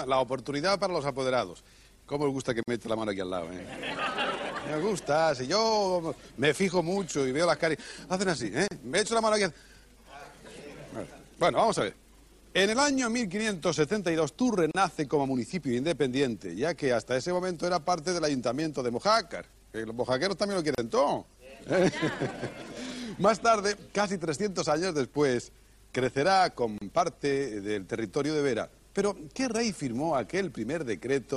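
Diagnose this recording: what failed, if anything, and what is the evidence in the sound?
It's the codec stage: a gap at a join of encoded pieces every 6 s (2.63, 8.68, 14.71, 20.75, 26.78 s), 48 then 34 ms of untrimmed encoder delay and end padding.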